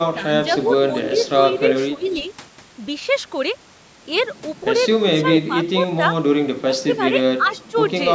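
At 1.05 to 1.3 s a faint second copy of the speech trails the live voice by about 309 ms. This is an echo leak. The far end was likely on a loudspeaker, and its echo canceller let some of the pickup through and sent it back. The copy sits about 15 dB under the speech. A second, much weaker leak follows at 2.01 to 2.28 s, about 30 dB down with the same 309 ms delay.

Speech suppressed in double talk first shows at 1.95 to 2.07 s, overlapping that second echo. Both sides were speaking at once. The canceller, likely unable to tell the talker from the returning echo, pulled the level down. The voice drops by around 15 dB for roughly a tenth of a second. Shallower dips of about 10 dB follow at 5.48 to 5.53 s, 6.62 to 7.01 s and 7.38 to 7.75 s. They make the speech sag and flicker in pieces.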